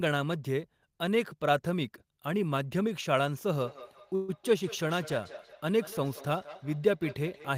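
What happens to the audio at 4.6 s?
At 4.6 s there is feedback echo between two devices, running from 3.5 s to the end. A second device replays the speech into the microphone. Each word returns about every fifth of a second, about 16 dB below, thinner and ringing.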